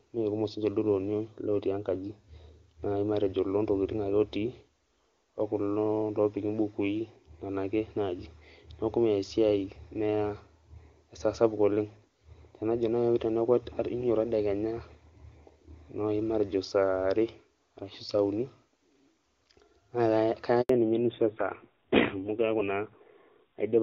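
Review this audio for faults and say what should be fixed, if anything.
At 20.61 s the speech fades out within a few tens of milliseconds and stays silent until 20.69 s, an 80 ms dropout. This handover gap comes from the call switching networks while no speech frames arrived, so that stretch of speech is simply lost. Completing the new link before releasing the old one, or concealing missing frames, would avoid it.

From 20.69 s to the end, the speech turns duller and rougher, with nothing above 4 kHz. Before this point the HD Voice wideband codec sounded clean. This is a fallback to narrowband, and the rasp fits a low-rate AMR-NB mode near 7.4 kbit/s. Keeping both networks on AMR-WB across the handover would prevent this.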